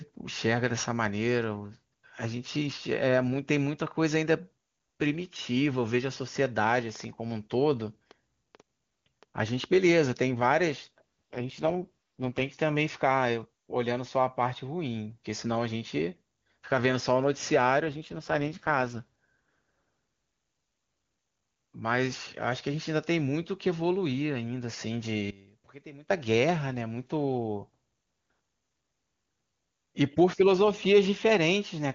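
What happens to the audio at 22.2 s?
Nothing goes wrong at 22.2 s: the speech carries on intact through that moment, with the AMR wideband (HD Voice) coding, at a rate that sounds like around 24 kbit/s, leaving at most faint traces.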